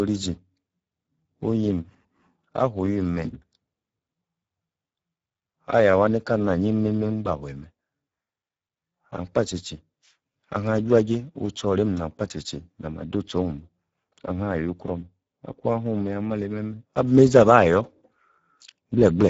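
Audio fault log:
Throughout: Speex codec at low bitrate, roughly 10 kbps, starves the CELP excitation, leaving speech hoarse and noisy with nothing above about 7.7 kHz.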